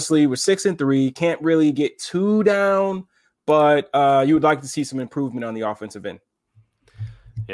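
Right after "really get too down", from 3.1 s to 7.4 s, a steady tick at 10 Hz rides under the speech. That's a resampler restarted on every block: each 100 ms chunk gets converted on its own, so its edges come out slightly wrong.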